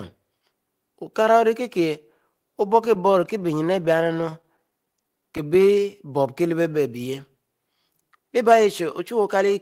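Between 2.85 and 5.40 s the packets arrived late or more slowly than they were played out, so the jitter buffer kept running dry. This produced repeated stalls (stutter). Twenty-five times across that stretch the receiver bridged the gap by extending the last sound it had, each fill short, none longer than 13 ms, adding up to about a quarter of a second. Nothing is lost from the speech, but roughly a tenth of that span is concealment, so the delivery catches and drags in small hitches.

Overlapping the end of that stretch, from 5.09 to 6.24 s, the buffer was low or had just raised its target delay. It rebuilt its reserve through a jitter buffer slow-down, repeating single pitch periods and slivers of pause over and over to add about 113 ms. Playback runs at about 91% of normal speed while the pitch stays where it was, so the speech sounds drawn out.

From 8.22 to 9.51 s the opposite happened. 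The buffer held more audio than its target, and the receiver performed a jitter buffer speed-up, snipping out short pieces one or a few pitch periods long, again and again, to trim roughly a tenth of a second of delay. The speech plays at about 107% of normal speed at unchanged pitch and comes across as hurried.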